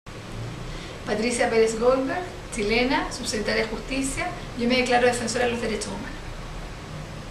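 Nothing in this one trips the ear as a fault, so there's no dropout, glitch or distortion to point to anywhere along the way.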